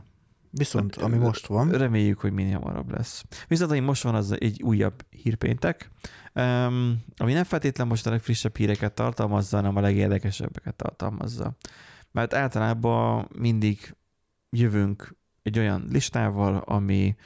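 No faults can be heard anywhere in the speech recording, with nothing in it that points to a problem in capture, processing or playback.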